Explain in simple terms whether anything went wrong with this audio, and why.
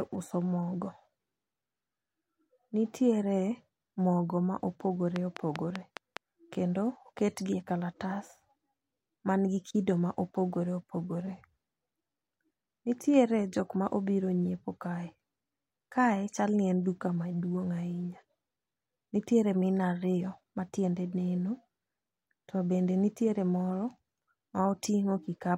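A train of clicks runs from 5.16 to 6.18 s, right after "mogo ma opogore": about seven even ticks, five a second, likely from electrical interference or a faltering interface.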